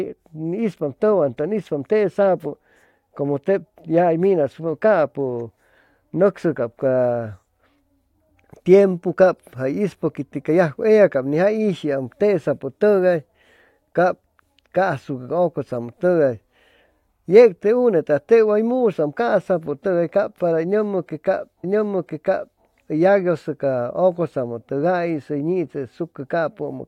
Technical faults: stream segment repeated

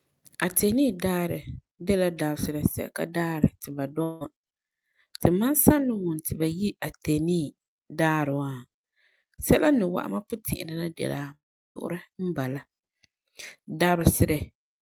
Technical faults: long network dropout

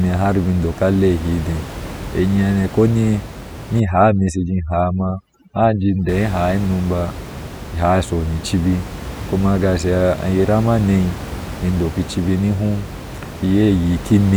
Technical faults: overdone noise removal

